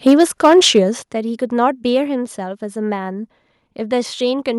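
From 0.06 to 0.79 s the speech carries a harsh, crackling edge on its loudest syllables, the sound of microphone overload. The peaks run about 4 dB past the converter's ceiling and have their tops flattened, with a small but steady share of samples, around 3 percent, pinned at the converter's limit. The likely cause is an input volume set too high for the talker, so the peaks run into the converter's limit.

At 1.02 s the whole signal, voice and background together, drops abruptly by about 9 dB in a single step, which is the pattern of the microphone volume being stepped down. It comes shortly after the distorted stretch, and this points to the call software having likely detected the overload and cut the device's input volume in one move. There is no gradual fade.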